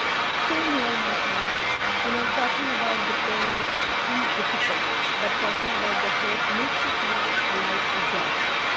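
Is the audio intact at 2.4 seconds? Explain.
No. Throughout the clip, from 0 to 8.8 s, the far end's echo canceller likely failed to remove its loudspeaker's pickup, so this echo leak sends back a delayed copy of the speech about 0.32 s late, roughly as loud as the original or louder. Just before, at about 2.33 s, one lost packet was rebuilt from error correction: the decoder filled the 20 ms gap with the low-bitrate copy carried in the next packet, so nothing drops out, but that moment sounds briefly rougher and noisier.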